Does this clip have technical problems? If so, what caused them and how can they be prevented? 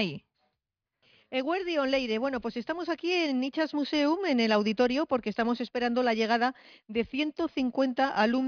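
No, nothing stood out as a technical problem on listening, so there is nothing here that needs a cause or a fix.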